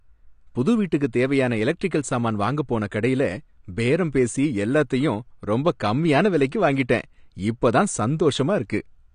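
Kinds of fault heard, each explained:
AAC compression: a low-bitrate perceptual codec, likely AAC-LC at around 32 kbps, discarded detail, so the speech has nothing above 9.6 kHz and sounds plainly dull and smeared.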